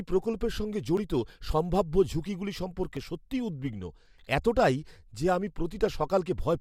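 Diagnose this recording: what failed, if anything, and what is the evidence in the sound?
Tiny skips at 0.97 s and 2.97 s, two seconds apart: overlap between stream segments, where the player trims a few milliseconds of speech at each join.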